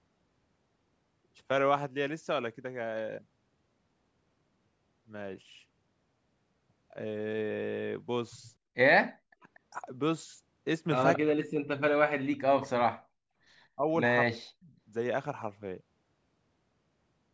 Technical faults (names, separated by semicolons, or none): speech suppressed in double talk; echo leak